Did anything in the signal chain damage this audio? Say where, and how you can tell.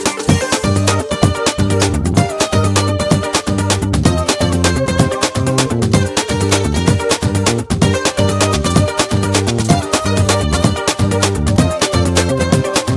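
Yes, a wrong sample rate at playback, from start to finish. Everything runs 1.5 times fast and about 7 semitones high, which fits 16 kHz material played at 24 kHz. On a spectrogram every harmonic and band sits 1.5 times higher, and all events are compressed in time.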